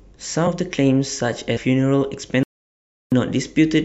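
At 0.46 s, compressed frames are skipped. A few whole frames never reach the output, about 100 ms of speech. The frames appear to be about 26.1 ms long. The speech jumps forward, and overlapping frames blur the join into a short smeared blip, not a click. It happens again at 1.56 s, with roughly 300 ms lost.

From 2.43 s to 3.12 s there is an audio dropout to silence, lasting 0.69 s. The speech cuts off mid-flow into silence with no room tone. The input was likely lost while recording continued writing silence. Everything in the gap is gone.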